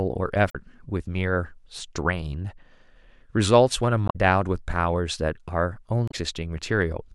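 At 0.49–0.55 s, 4.06–4.16 s and 6.08–6.14 s the speech breaks into brief glitches caused by damaged data in a compressed stream: the decoder misreads corrupted frames until it resyncs.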